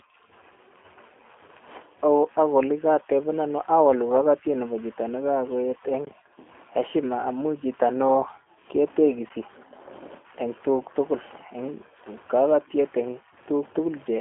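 From start to finish the speech carries G.729 codec damage, specifically the G.729A variant at 8 kbit/s. Each 10 ms frame is rebuilt from a vocal tract filter, a pitch predictor and a few pulses, giving a rough, synthetic edge. The band sits around 250 Hz to 3.5 kHz, with nothing above 3.8 kHz.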